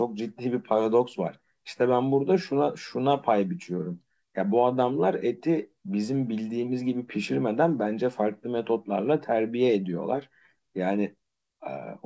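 Speech, with no audible faults.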